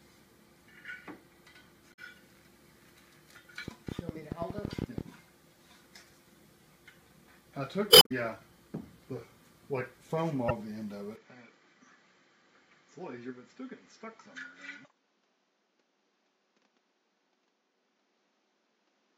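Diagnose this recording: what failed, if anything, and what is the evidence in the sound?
The compressed stream has damaged data at the codec and storage stage, at 1.90–1.99 s, 7.88–8.12 s and 10.48–10.51 s. At each spot the decoder hits corrupted frames, cannot parse them, loses sync and hunts for the next valid frame header. This produces brief chirps or squawks that replace the sound for those moments. The longest disturbance, about a quarter of a second, is the one near 8 s.

A train of clicks runs from 3.68 to 5.02 s. It points to a problem in the analogue wiring or interface, most likely interference from nearby equipment or a faulty connection or power supply. There are about fifteen clicks at roughly 12 per second, spaced irregularly. The pulses are similar in shape and peak well above the programme, something like 15 dB over it. They are heard as a ragged ticking laid over the sound, including any pauses.

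From 11.16 s to the end, the input switched to a poorer device, likely another microphone or a headset's call profile taking over. There is no gap at the switch. The bandwidth narrows abruptly, with nothing above 7.6 kHz, so the sound turns duller and boxier. The level drops by about 5 dB, and a new noise floor appears, roughly 30 dB below the signal, belonging to the new device rather than the first.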